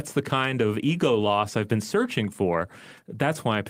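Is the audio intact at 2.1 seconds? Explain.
Yes, the speech at 2.1 seconds is intact, with no audible fault at that moment.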